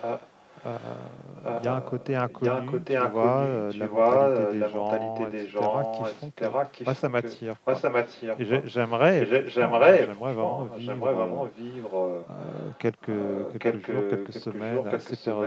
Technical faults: echo leak

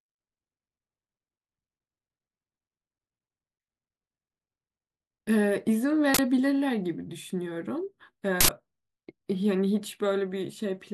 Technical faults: uninitialised buffer

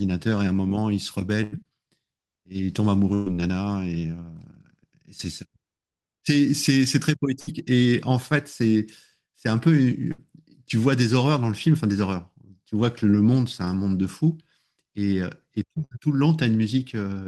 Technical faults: burst of packet loss; short concealed packet loss

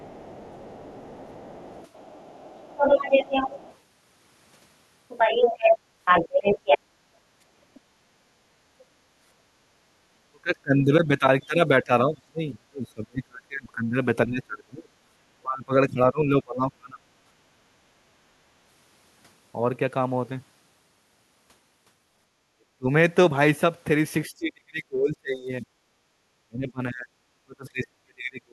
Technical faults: other side's voice leaking through; speech suppressed in double talk; background gated by the echo canceller

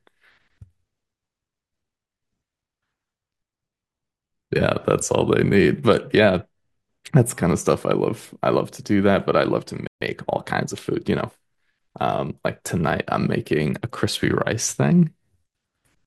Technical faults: playback stall; time-compressed catch-up

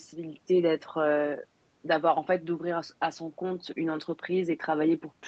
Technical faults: none

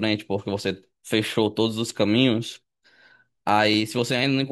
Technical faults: periodic USB or driver dropouts

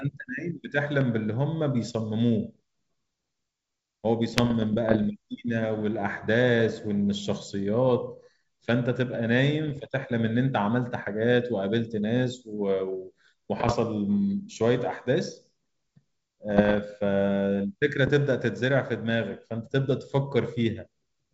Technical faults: loud pop; bit errors on an ADPCM link

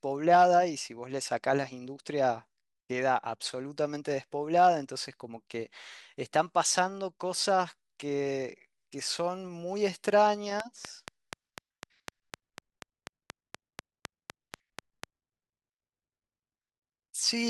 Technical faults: train of clicks

